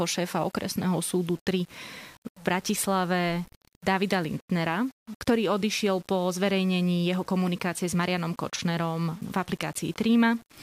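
Throughout the speech, a grainy distortion sits roughly 30 dB below the signal, likely from low bit depth without dither, which fits rounding to 7 bits. Unlike steady dithered hiss, this grit follows the signal, roughening quiet syllables and sputtering or dropping out in pauses.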